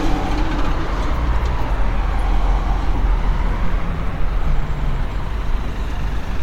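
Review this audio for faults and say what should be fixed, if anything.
At 2.95 s there is a skip ahead: roughly a fifth of a second of sound is dropped and playback jumps straight on, showing as an abrupt waveform discontinuity with no gap.

From 3.05 to 5.56 s, jitter buffer speed-up runs the sound 3% faster at unchanged pitch, trimming around 70 ms in many tiny pitch-period cuts that a spectrogram shows as slightly compressed events.

To prevent both, size the jitter buffer for the arrival bursts and let it shrink gradually rather than discarding whole stretches at once.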